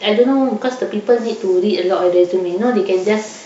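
Nothing in this recording stands out as a technical fault at any point, so there's nothing to flag along the way.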